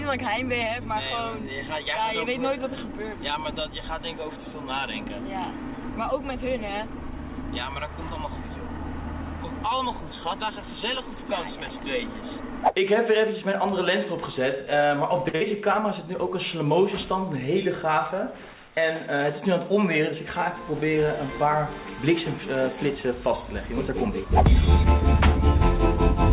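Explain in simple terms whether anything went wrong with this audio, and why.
Two things go wrong, back to back, around 15.3 seconds.

At 15.28 s there is a short stall from a late packet: the sound freezes and holds for about 54 ms, then picks up exactly where it stopped, so nothing is lost.

Right after, at 15.35 s, a burst of packet loss follows: a stretched, fading fill of about 51 ms covers a gap, and when the sound resumes about 60 ms of audio has been skipped.

The stall only pauses the sound, while the loss jumps ahead. Both sit inside a phone-style call connection that carries nothing above 4 kHz.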